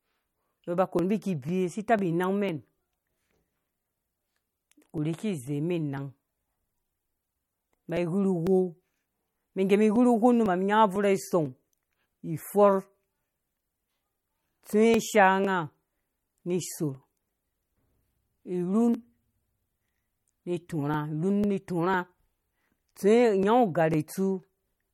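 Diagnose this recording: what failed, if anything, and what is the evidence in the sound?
At the codec stage, plainly audible damage runs throughout this speech: a watery, swirling texture and nothing above 17.4 kHz. This is likely MP3 compression at a low rate, consistent with about 48 kbps, where weak frequency lines switch on and off. Unlike network loss, it is continuous, not gapped.

At the driver or buffer stage, periodic USB or driver dropouts appear as regular ticks every 0.50 s from 0.49 s to 24.43 s, about fifty of them. Each skips roughly a millisecond of audio rather than inserting silence, so the waveform jumps. The strict clock-like spacing points to a blocking background task.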